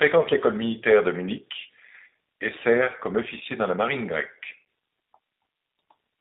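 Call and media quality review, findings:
G.729 codec, throughout. Speech band-limited to about 200 Hz to 3.7 kHz, rough and synthetic from coarse pulse excitation and vocal tract modelling, consistent with an 8 kbit/s G.729A encode.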